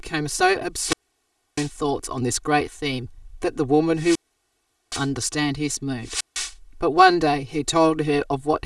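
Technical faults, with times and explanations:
Throughout: channel delay (comb filtering). One channel lags the other by about 3 ms. Summed to mono, evenly spaced frequencies cancel from around 200 Hz upward, so the speech sounds hollow.
0.77–1.72 s, 3.95–5.10 s, 6.03–6.54 s: wireless microphone squelch dropout. The radio signal fades and hiss rises. Then the receiver's squelch mutes the output for 0.65 s, 0.77 s and 0.16 s before the sound returns.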